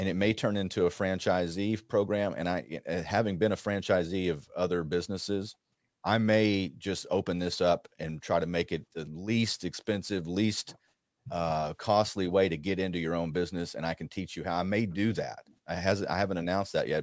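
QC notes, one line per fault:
Throughout, aliasing: sibilants turn gritty and metallic against a spectrum packed up to 8 kHz, which fits an unfiltered drop to 16 kHz; folded highs sit about 25 dB under.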